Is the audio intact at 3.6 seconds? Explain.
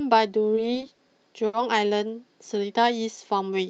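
Yes, the speech at 3.6 seconds is intact, with no dropout, glitch or other fault at that moment.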